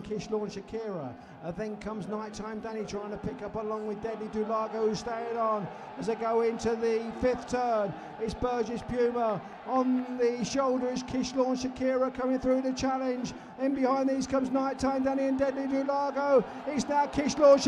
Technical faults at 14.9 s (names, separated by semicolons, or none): none